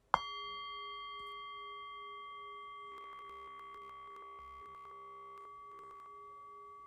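From 2.92 to 5.45 s, and again from 5.72 to 6.06 s, the sound turns robotic: a rigid 66.8 Hz buzz. This is likely from repeated short buffers, with most of the audio replaced.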